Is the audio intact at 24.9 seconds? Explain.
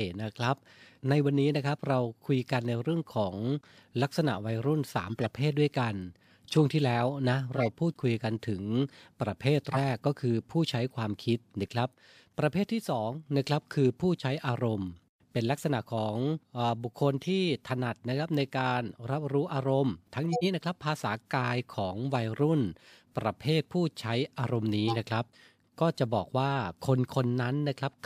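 No. At 24.9 seconds you're right inside a corrupt frame decoded, running from about 24.88 to 24.96 s, so roughly 80 ms, which fits a single damaged frame. Some bits in that compressed frame got flipped, and the decoder played it anyway, misreading gains and codes so energy lands at the wrong frequencies. You hear it as a short chirpy blip of noise cutting into the speech, peaking around -15 dBFS, then it's gone once the next clean frame arrives.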